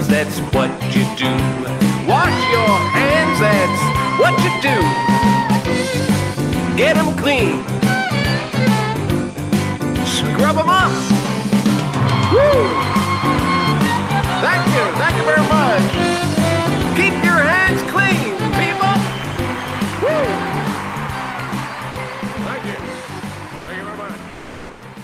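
Sound dropped by the voice detector, at 21.91 to 21.95 s and again at 23.55 to 23.67 s: the sound briefly gives way to a plain steady noise or near silence, for about 40 ms the first time and about 120 ms the second, then returns. The likely cause is a sender-side voice activity detector treating this material as background and pausing transmission, as Opus discontinuous transmission does. The receiver covered each gap with synthetic filler.

Comfort noise in place of the background, from 24.29 to 24.81 s: for about half a second the real background, sitting about 23 dB below the loudest passages, is replaced by a smooth, textureless hiss. Its level matches what was there, so the change is heard as lost detail rather than a drop in volume. This is likely the receiver generating noise shaped to the background while the sender sends only occasional updates during a detected pause.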